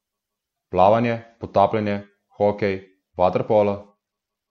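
Speech, with a Bluetooth SBC bit pool drop from 3.10 s to the end at 4.50 s. The treble suddenly dulls and gritty noise rises. Fewer bits starve the top sub-bands and coarsen the rest. It fits the bit pool falling from 28 to 12, near 96 kbps.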